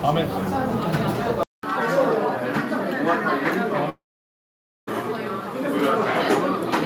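At 1.43 s the system likely switched its input to a poorer device. After a silence of about 200 ms, the everyday sound returns duller, with nothing above 13 kHz and a faint new noise floor, at much the same level, through to the end.

From 3.89 to 4.89 s a long network dropout likely cut off the audio for about 980 ms. The receiver briefly extends the last sound as a fading tail, then leaves about 0.88 s of silence before the audio resumes with the lost stretch missing.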